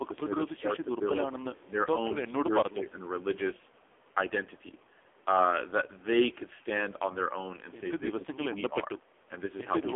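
From the first moment to the end, the speech sounds thin, boxed-in and buzzy, with a synthetic, rasping edge on every syllable and nothing above 3.5 kHz and little below 300 Hz. This is the AMR narrowband mobile codec at work, heavily degraded. The voice is rebuilt from a vocal-tract model excited by only a few pulses per short sub-frame, and the coarseness of that rebuilding points to one of the lowest modes, around 5.9 kbps.

Between 1.66 and 1.76 s the level suddenly sags, by about 10 dB at its deepest, and parts of the sound thin out or drop away for roughly 70 ms in total within that window. The likely cause is speech suppressed in double talk: with both ends talking at once, the echo canceller could not tell this talker apart from loudspeaker echo and pulled the signal down.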